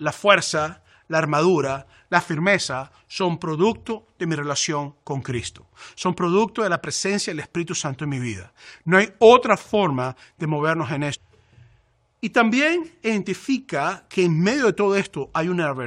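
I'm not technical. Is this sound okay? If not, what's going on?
No, not quite. At about 11.13 to 11.15 seconds the speech suddenly jumps ahead with a tiny blip, so a chunk is missing. That's likely a stream segment skipped: one piece of the stream didn't load, and the player carried on with the next.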